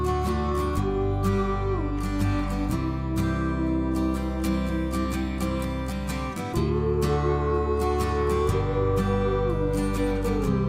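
Nothing here calls for attention, as no technical faults turn up anywhere in this audio.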